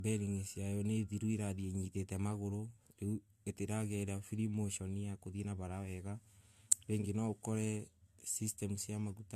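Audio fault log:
throughout: low-bitrate audio saved at a high bitrate. The speech stops dead at 14.4 kHz and keeps a dull, smeared coding texture. The cause is likely an earlier encode that fits 64 kbit/s AAC, re-saved as high-rate MP3 that cannot restore what was discarded.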